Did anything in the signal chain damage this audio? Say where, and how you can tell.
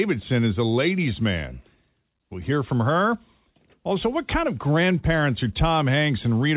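No, the speech is intact, and its band stopping at 4 kHz with the usual coding noise of a narrowband call points to a working telephone-grade path such as 64 kbps G.711 A-law rather than to any damage in the chain.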